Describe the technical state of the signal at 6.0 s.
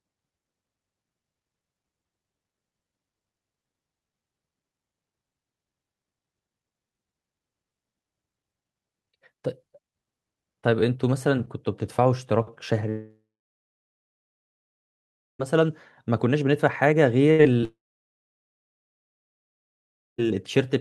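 At 6.0 s the speech signal is intact, with no technical fault audible at that moment.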